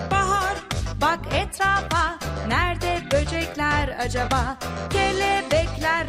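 No technical faults can be heard anywhere in this recording.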